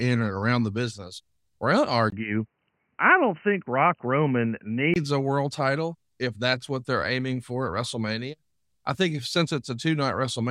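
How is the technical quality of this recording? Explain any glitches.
The recording has one clear glitch. From 2.10 to 4.96 s the speech suddenly turns dull and boxy, with nothing above 3 kHz, then opens back up. A brief 20 ms silence marks the change, a faint new background noise sits well beneath the speech, and loudness stays about the same. The likely cause is the input switched to a poorer device, such as another microphone or a headset's call profile, whose narrower band strips the upper frequencies until the original input returns.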